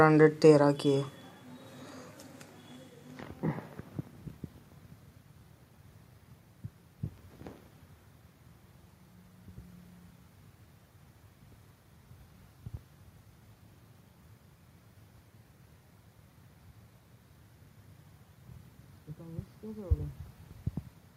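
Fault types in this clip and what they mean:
No fault types can be heard in this clip.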